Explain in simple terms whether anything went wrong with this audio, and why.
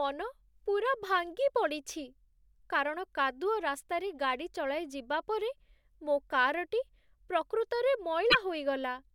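Near the end, from 8.27 to 8.35 s, a short glitch cuts into the speech. This is damaged data in a compressed stream: the decoder misreads corrupted bytes and loses its place, causing a brief glitch.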